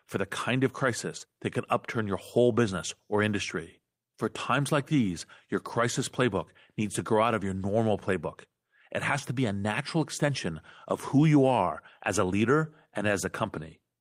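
No technical faults can be heard anywhere in the recording. There is nothing here to point to or place in time.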